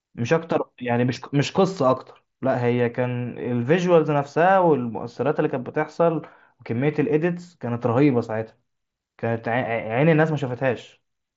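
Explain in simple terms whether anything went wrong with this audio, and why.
Nothing went wrong: the speech came over a Bluetooth headset link using the mSBC codec, and that link did its job with no faults to report.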